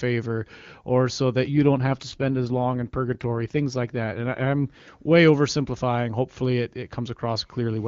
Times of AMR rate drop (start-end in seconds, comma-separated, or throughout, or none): 1.60-4.88